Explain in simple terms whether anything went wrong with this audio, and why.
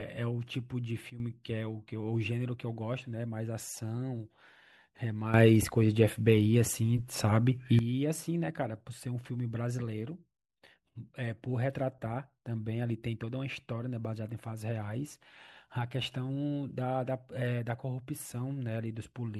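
Yes, something went wrong. This speech has two sudden gain jumps. At 1.1 seconds the sound drops much quieter, then returns at 1.2 seconds. From 5.34 to 7.79 seconds it becomes much louder, then drops back. Each change happens instantly, with no fade. The background noise rises and falls together with the voice. The likely cause is a volume setting being changed in one step, without a gradual ramp.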